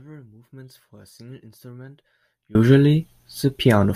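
From the start until 2.55 s the speech sits in an audio dropout to a faint residue: only a weak leak of the signal, about 25 dB down, remains before full level snaps back abruptly. The likely cause is an upstream break with the downstream path still live.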